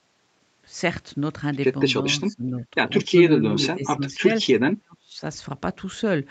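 From 2.2 to 2.65 s, 3.09 to 3.55 s, 3.75 to 4.01 s and 4.59 to 5.21 s, the speech dips by about 15, 20, 15 and 40 dB. This is likely speech suppressed in double talk: the echo canceller turns the talker down along with the far-end echo.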